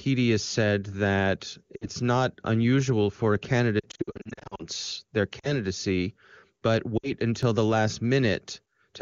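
A speech clip with lost AMR speech frames. At 1.75 to 1.87 s, after "said that", about 60 ms drops out. The decoder repeats its last good settings with falling gain, so the sound fades toward silence. After "not unusual for a", losses scatter from 3.80 to 4.65 s, with runs up to 60 ms. Shorter gaps follow at 5.40 to 5.53 s and 6.98 to 7.12 s. At 7.43 s a skip ahead points to a dropped buffer (overrun), likely from samples read too late. A tiny piece is lost and the two sides join directly.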